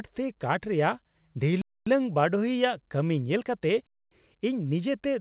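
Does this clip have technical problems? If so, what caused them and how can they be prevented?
Yes. A gap between chunks leaves 250 ms silences at 1.62 to 1.87 s and 3.87 to 4.12 s. The spacing fits 2-second chunks, each starting late rather than running straight on. Queue the next chunk before the current one ends to prevent it.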